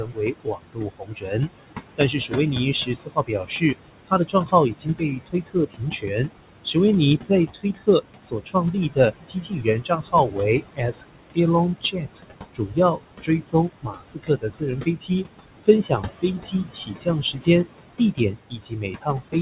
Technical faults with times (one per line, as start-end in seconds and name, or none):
0.00-19.41 noise suppressor artifacts
0.00-1.35 speech cut by the noise suppressor
1.97-15.11 speech cut by the noise suppressor
15.64-19.41 speech cut by the noise suppressor